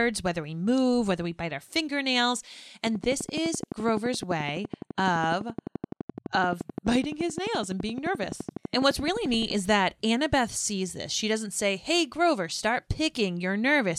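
A speech recording carries a train of clicks from 2.87 s, just after "we bite our fingernails", until 9.52 s, just before "is that". The clicks arrive at a steady 11.7 per second, around seventy in all. Each has much the same sharp shape. They stand out roughly 10 dB above the speech and keep ticking through the pauses. The likely cause is interference from nearby equipment or a faulty connection or power supply injecting repeated pulses.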